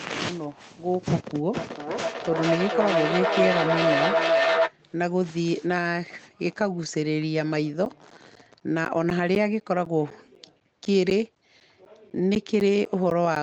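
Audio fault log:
1.54–4.76 s, feedback howl: a tone around 700 Hz builds as sound loops from loudspeaker back into a microphone and gains level each trip, pulsing about every 400 ms and peaking about 2 dB above the speech before it's cut off.
7.85–13.36 s, periodic USB or driver dropouts: every 0.25 s a short chunk, roughly 10 ms, drops out to silence, about twenty times, giving a steady tick under the speech. That even spacing points to a background task stalling the USB bus or audio driver.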